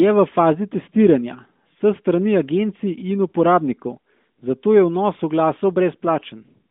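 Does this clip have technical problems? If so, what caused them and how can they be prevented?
No, there are no technical problems in this clip.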